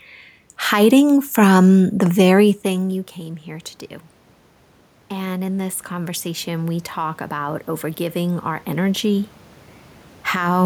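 From 5.09 to 9.38 s, automatic gain rising: the input level had fallen by about 18 dB, and the gain control answered by slowly pushing its gain up by about 9 dB over those four seconds. The speech and the room noise beneath it swell together, so the background audibly climbs along with the voice. The level change at around two and a half seconds, by contrast, is the talker moving relative to the microphone.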